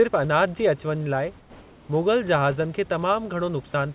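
From 1.40 to 1.88 s, the sender likely paused transmission, so comfort noise replaces the background: the room's textured noise turns steady and featureless, about 2 dB quieter. From 3.72 to 3.74 s, sound is dropped by the voice detector, likely mistaken for background, so about 10 ms of audio gives way to flat noise within the 4 kHz-limited call band.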